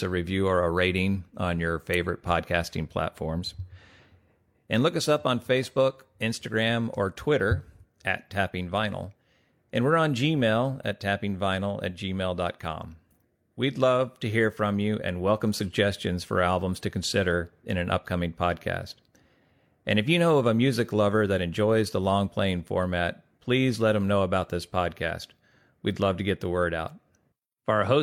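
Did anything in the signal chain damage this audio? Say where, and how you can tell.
No, nothing in the signal chain has audibly damaged this speech recording. No stage along the path, from capture through to playback, shows any sign of trouble a listener could point to.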